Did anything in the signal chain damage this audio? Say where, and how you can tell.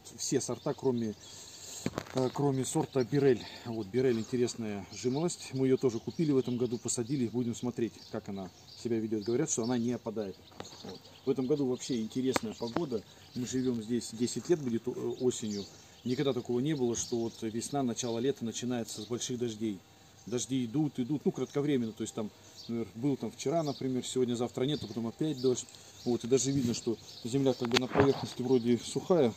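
No, nothing along the chain seems to have left a mark on this one, so there's no damage to point to anywhere in it.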